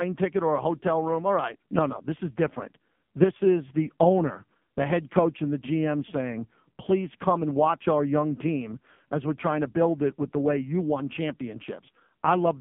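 From start to finish the speech carries AMR narrowband mobile codec damage, and it is heavy. The sound sits in a band of about 150 Hz to 3.5 kHz. It has a buzzy, synthetic character, which points to a low mode near 5.9 kbps. A plain band-limit filter would sound dull but stay natural.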